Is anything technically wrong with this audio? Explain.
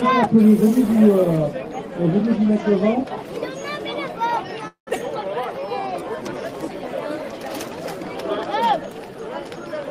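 Yes, there are three faults in quick succession.

At 4.67 to 4.89 s there is a call audio freeze. The last sound is stretched into a fading buzz, then goes silent for 120 ms. The likely cause is delayed packets emptying the jitter buffer. Nothing is lost. A gap is inserted instead.

At 4.95 to 4.97 s the audio skips ahead. Around 150 ms is dropped, and the two sides join almost seamlessly, as an abrupt jump.

From 5.42 to 6.42 s there is a jitter buffer slow-down. The receiver repeats single pitch periods to rebuild its reserve, adding 138 ms. Playback runs at 87% speed with unchanged pitch, so sounds are drawn out.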